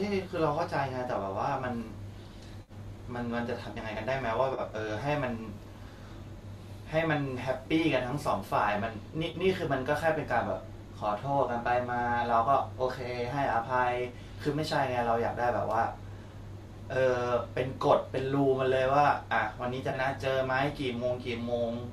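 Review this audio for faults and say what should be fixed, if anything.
AAC frame loss with concealment occurs four times: 2.62–2.72 s (60 ms), 4.54–4.61 s (40 ms), 9.30–9.35 s (30 ms) and 19.90–19.95 s (30 ms). In each, the decoder bridges the missing frames by reusing the last good spectrum, so the speech turns briefly smeared and noisy instead of cutting out. That filled-in texture, rather than true silence or a click, separates it from a plain dropout or buffer underrun. The gap lengths fit the roughly 10 ms frames of the low-delay AAC stream that is the likely carrier. To prevent it, add forward error correction or a small jitter buffer so lost packets are recovered before decoding.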